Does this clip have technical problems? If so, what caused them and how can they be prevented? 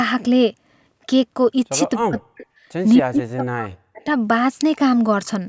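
Yes. The echo canceller likely misjudged overlapping talk as loudspeaker echo and attenuated it, so this speech suppressed in double talk sinks by about 40 dB from 1.98 to 2.48 s and again from 2.98 to 4.06 s, fading almost to silence. Using a headset, or a canceller with stronger double-talk detection, prevents this.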